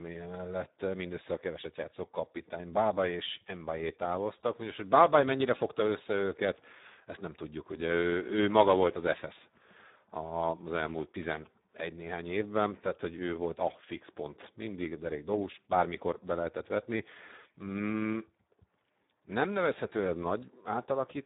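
Throughout the recording, a Speex codec running at a very low quality setting leaves the CELP coder with too few bits for its excitation. The speech turns hoarse and noisy, with nothing above 3.8 kHz, damage that fits a bitrate around 8 kbps.

From 10.75 to 11.47 s, just before "néhány évben tehát hogy", GSM signalling bursts from a nearby 2G phone are rectified by the audio circuit. This produces a galloping dit-dit-dit of short 217 Hz buzzes, roughly 20 dB below the speech.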